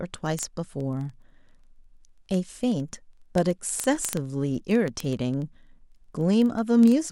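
A digital link feeding this speech is being read by a device running on its own clock, unlocked from the sender's, with the two rates apart by something on the order of 500 ppm. Each time the clocks slip past each other, one sample is dropped or repeated. From 0.14 s to 7.08 s this produces word clock ticks, sharp clicks of uneven strength arriving about every 40 ms, around 150 in all, as a steady fast pattern under the speech.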